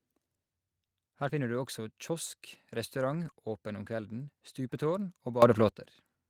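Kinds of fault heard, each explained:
Lost packet rebuilt from error correction: Twice the speech turns briefly rough and grainy without any silence, at 1.27 to 1.29 s just before "finner du også kiosk", and at 3.23 to 3.29 s between "du også kiosk restaurant" and "åpen om kvelden stupetårn". Packets went missing, but each following packet carried a low-bitrate spare copy. The decoder played those spares instead, covering about 20 ms the first time and 40 ms the second.
Sudden gain jump: From 5.42 to 5.69 s, just after "åpen om kvelden stupetårn", the speech and the background noise under it step up together by about 12 dB with no fade in, then fall back. Because everything rises at once, this is a level change in the signal path rather than anything the speaker did. The likely cause is a digital gain setting or bit shift applied instantly instead of ramped.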